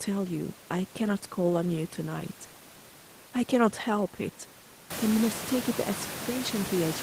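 Nothing stood out on listening to this speech; the room's own background noise rises by about 17 dB at around 5 s and stays about 10 dB below the speech, which is part of the recording.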